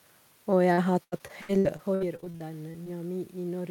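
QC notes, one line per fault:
0.73–2.88 s, repeated packet loss (robotic sound): fifteen short holes, longest 83 ms, each filled by extending the preceding sound. About a quarter of the span is patched, giving choppy speech with pieces missing. Unlike one dropout, the holes recur rapidly. The level change near 1.5 s is the talker moving.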